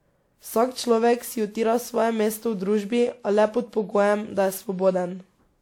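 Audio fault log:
throughout generation loss. Speech sounds swirly, smeared and hollow, with blurred attacks and nothing above 18.3 kHz. Likely repeated lossy re-encoding, fitting about seven 128 kbit/s WMA passes.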